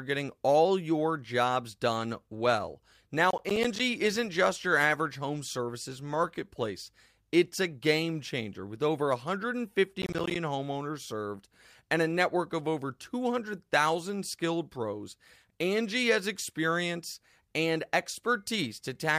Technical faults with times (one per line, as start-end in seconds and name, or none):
3.30-3.80 processor overload crackle
10.02-10.36 processor overload crackle